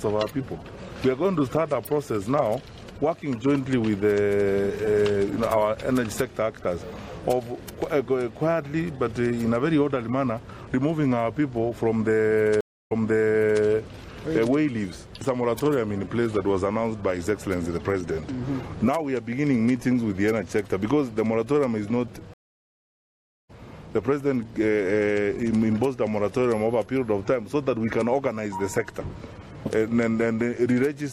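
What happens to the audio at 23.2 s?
A stream reconnect occupies 23.2 s: the connection dropped at 22.34 s and the player went silent for about 1.15 s, until 23.51 s. Once it reconnected, a fresh decoder picked up mid-stream, so the sound resumes roughly 0.7 s further on than where it stopped, with a jump in continuity rather than a smooth join. At 23.2 s itself there is only the silence of that gap.

Word clock ticks run from 0.15 s to 31.07 s, so they straddle this moment too. The receiving device runs on its own clock rather than locking to the sender's, and the mismatch of a few hundred parts per million makes the two clocks slip about every 70 ms. At each slip, one sample is dropped or repeated, giving a steady train of sharp ticks of uneven strength.

Around the gap, the audio is watery and swirly, with smeared attacks, likely from MP3 compression at a bitrate near 64 kbps, where the encoder starves weak frequency lines.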